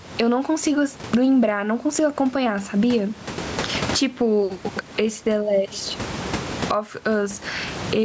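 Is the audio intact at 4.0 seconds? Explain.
No, gain pumping runs through the whole clip, 4.0 s included. Likely overdriven gain is hitting a fast limiter, so the gain swings about 25 dB, bringing loud and soft parts closer in level and squashing the sound.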